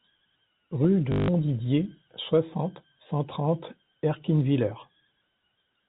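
From 1.12 to 1.28 s the speech breaks into a short robotic stutter: packet loss with the last packet repeated. For 160 ms the receiver kept replaying the final packet it had received. That span fits eight lost 20 ms packets, so the repeats form a 50 Hz buzz. A plain dropout would leave silence, but here the same fragment is heard looping, so the gap is filled. The narrow G.711 telephone band runs throughout.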